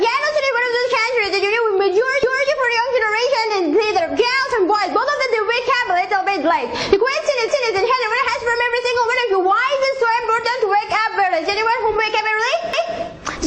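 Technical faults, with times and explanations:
2.23–2.48 s, 7.48–7.73 s and 12.73–12.98 s, overlapping chunks: at each of these joins a quarter-second slice of the sound plays twice, so you get a little stutter where the same 250 ms comes round again. The audio went through in 5-second chunks, and each new chunk started 250 ms before the previous one had finished. The doubled bit lands at every seam, which is why the stutters come at such even spacing.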